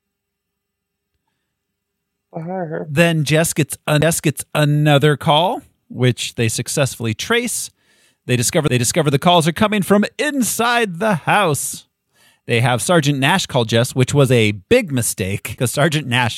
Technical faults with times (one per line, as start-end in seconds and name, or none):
4.01 CD skip
8.68 CD skip